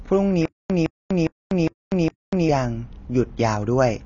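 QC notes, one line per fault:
Throughout, AAC compression: there's nothing above 7 kHz and the codec damage is plainly audible, giving a dull, smeared sound with warbly, fizzy edges on sustained and hissy sounds. That's likely AAC-LC at a low bitrate, consistent with around 24 kbps.
0.45–2.49 s, stutter with silent gaps: a 162 ms fragment plays 5 times, each followed by 245 ms of silence, so it comes round every 407 ms. Likely a stalled player replaying its last chunk on each retry, and whatever should have played there is gone.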